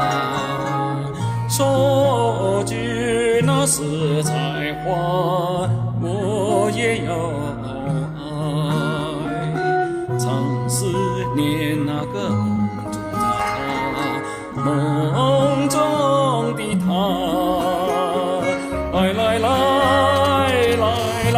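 GSM signalling bursts, 20.16 to 20.97 s: a nearby 2G phone's intermittent radio bursts are rectified by the audio circuit, giving galloping ticks and short 217 Hz buzzes roughly 10 dB below the sound. GSM phone buzz, 20.99 to 21.33 s: the phone now transmits in bursts 217 times a second, and the rectified pulses produce a hard, raspy, harmonic-rich buzz about 12 dB down.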